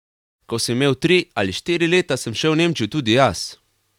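No technical faults occur anywhere in the speech.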